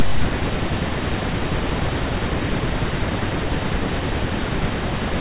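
Nothing goes wrong anywhere in this speech recording, so there's no fault to walk through in any order.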